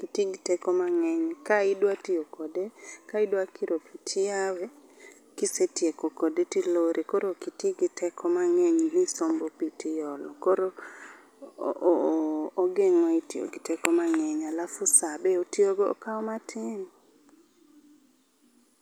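No technical faults can be heard anywhere in the recording.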